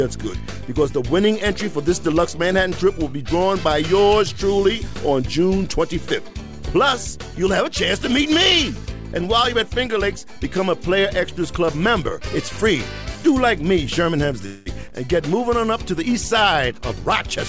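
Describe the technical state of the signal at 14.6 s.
A call audio freeze runs from 14.46 to 14.68 s, likely from packets stalling so the jitter buffer ran dry; the receiver stretched the last sound into a fading buzz for about 0.2 s, then resumed where it stopped, nothing lost, just that delay added.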